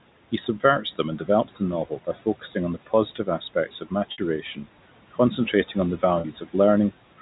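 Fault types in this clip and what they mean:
noise suppressor artifacts: The suppressor treats steady room noise as something to remove and lowers it frame by frame, by about 18 dB between phrases. The background therefore pumps down in pauses and back up under the speech.
speech cut by the noise suppressor: The suppressor misjudges quiet parts of the speech as noise and turns them down. Right after "and develops the novel", again after "on the", and near 4.4 s, brief stretches drop by about 10 to 15 dB and sound swallowed.
packet loss with pitch repetition: Audio goes missing in transit, and the receiver fills the gap by repeating the last pitch period. At 4.12 s (60 ms lost) and after "on the" at 6.2 s (40 ms) the sound briefly holds on a slightly buzzy tone.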